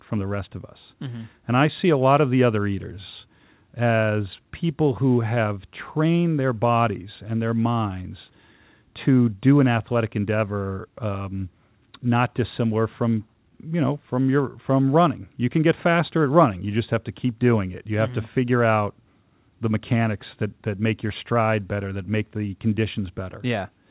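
Speech carried over a WebRTC call path shows no technical fault, with the audio band ending at 4 kHz in the way a narrowband telephone codec such as G.711 at 64 kbps would leave it.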